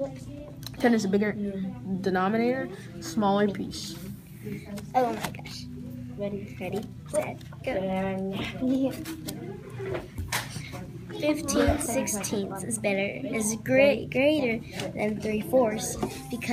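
Nothing stood out on listening to this audio.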